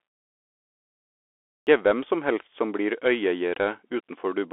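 From the first moment the speech sounds thin, boxed-in and grainy, with scratchy s sounds and a fine hiss beneath it. That is the Bluetooth CVSD headset codec: a one-bit, step-adapting coder whose narrowband path, consistent with a 64 kbps link, passes roughly 300 Hz to 3.4 kHz and nothing above 3.8 kHz.

At 1.31 s, after 1.31 s of silence, speech begins abruptly, its opening missing until 1.67 s. This is a clipped start after a pause. The output device slept through the quiet stretch and needed about 0.36 s to wake, swallowing those first sounds.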